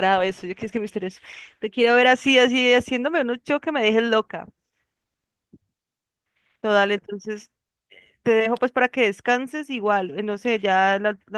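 No technical faults can be heard in this speech, so there is nothing to place in time order.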